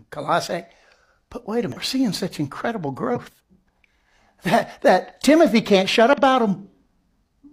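Damaged data in a compressed stream breaks into the speech three times: at 1.72 to 1.77 s, 3.12 to 3.18 s, and 6.13 to 6.18 s, each lasting about 50 to 60 ms. In each spot the decoder is handed corrupted bytes, misreads or discards the affected frames, loses its place, and hunts for the next valid frame header before normal decoding resumes. That brief misdecode comes through as a short chirp, squawk, click or hole cutting across the speech.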